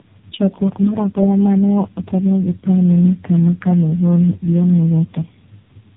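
Throughout the speech, the sound carries tandem speech coding: it was decoded and re-encoded at each network border, four speech coders in a row, with each stage working on the damage left by the one before. Nothing survives above 3.7 kHz, so it is muffled, and the roughness and warble build beyond what a single low-rate narrowband codec would leave. That layering, which points to repeated AMR-NB stages, sets it apart from one poor codec.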